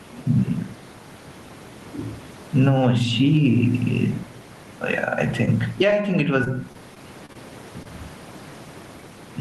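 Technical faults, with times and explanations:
Throughout: gain pumping. The gain swings by roughly 15 dB, pulling loud and soft parts closer in level and squashing the sound. Excess gain feeding a fast limiter is the likely cause.
6.44–7.37 s: repeated packet loss (robotic sound). Right after "I think it", several short gaps, the longest 27 ms, are patched by extending the last sound, giving a choppy sound with pieces missing.
7.83–7.87 s: short concealed packet loss. About 20 ms of audio went missing and was bridged by continuing the previous sound, heard as a brief smear.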